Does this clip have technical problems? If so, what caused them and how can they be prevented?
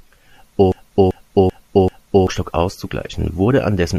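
Yes. A broken-record loop runs from 0.72 to 2.27 s: a 388 ms fragment of the speech plays four times back to back, each pass identical, before the clip resumes. The cause is likely a stall in the player, encoder or stream, which kept resending the last fragment it still held, so the speech that belonged in those 1.5 seconds is lost. Prevent it by detecting stalls and inserting silence rather than replaying stale buffer contents.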